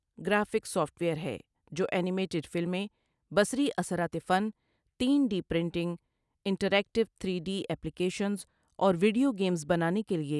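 The speech carries no audible technical fault at any point in the recording.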